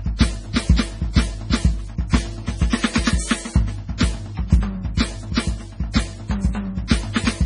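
Throughout the music, nothing sounds above 10.5 kHz, and smeared, swirly artefacts mix with a second layer of coding noise. Unlike single-codec compression, this points to likely transcoding between lossy codecs, fitting a low-bitrate MP3 re-encoded as AAC-LC.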